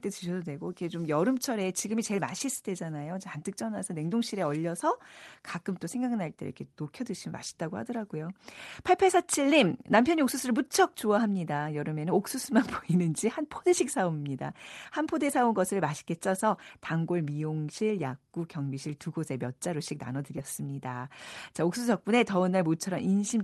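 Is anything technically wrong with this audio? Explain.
Yes. There is one short concealed packet loss, at about 20.36 s. About 10 ms of the call's audio arrived too late for the decoder. The receiver covered the hole by extending the preceding sound, using its pitch if voiced and shaped noise if not. About 4 ms of it was filled before blending back into the real signal. It is heard as a tiny smear or wobble in the speech. The call codec's top end stops near 12 kHz, which fits Opus.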